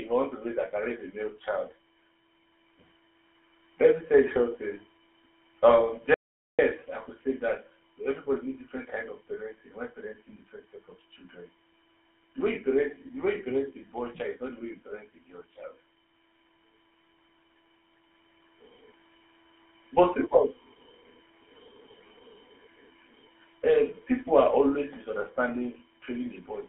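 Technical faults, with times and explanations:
Throughout: GSM full-rate codec. The speech has passed through the old GSM full-rate coder, which models the vocal tract and drives that model with a coarse, regularly spaced pulse excitation, keeping only a fraction of it. The result is a plainly audible buzzy, gravelly roughness on the voice. The band is limited to roughly 300 Hz to 3.5 kHz, so the speech is thin, with no low body and no crisp upper detail. It fits a 13 kbps coding rate.
6.14 to 6.59 s: audio dropout to silence. Silence replaces the speech for about 0.45 s. The signal stops abruptly mid-flow and resumes just as abruptly, and in between there is nothing at all, with no room tone left. That total absence points to the input being lost, likely from a brief disconnection or link failure, while the recording carried on writing silence. Whatever was spoken in that gap is gone.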